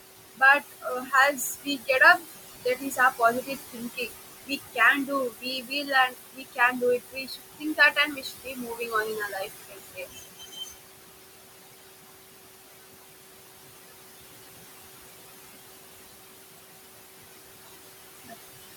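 Noise suppressor artifacts run through the whole speech recording. The room noise sits about 10 dB below the voice, and the suppressor pulls it down by about 19 dB in the gaps, so the background drops away between phrases and swells back under each one. Unlike a gate, the noise never switches cleanly off. It pumps band by band.

Speech cut by the noise suppressor comes in three stretches: 0.35 to 2.23 s, 2.65 to 4.09 s, and 4.46 to 10.74 s. The suppressor mistakes soft parts of the speech for noise and turns them down with the background, by about 21 dB at worst in the first and third stretches and about 18 dB in the second. About half a second is affected in each of the first two, and roughly three seconds in the long third stretch. Quiet consonants and word endings sound swallowed. This differs from the steady artifacts because the voice itself loses pieces, not just the noise floor.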